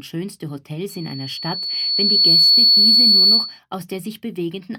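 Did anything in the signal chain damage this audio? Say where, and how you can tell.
Yes: loudspeaker feedback squeal. Playback looped into the microphone with gain above one, so a 4.4 kHz tone swelled from 0.89 s to 3.60 s.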